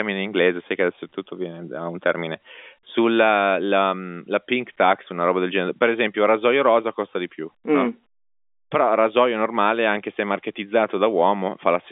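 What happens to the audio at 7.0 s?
Nothing goes wrong at 7.0 s: the speech carries on intact through that moment, with only the narrow telephone band of the G.711 line that runs through the whole recording.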